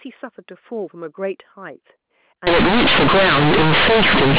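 At 2.47 s the speech turns into companded audio read as linear and stays that way to the end. The A-law bytes are being played as plain 8-bit samples without expansion, so every sign change throws the output across about half its range, and quiet passages come out as loud as peaks. Before this point the A-law telephone coding sounds normal, limited to below 4 kHz. Simple clipping only flattens the loudest moments, but here pauses fill with heavy noise and the whole signal becomes harsh, buzzing distortion.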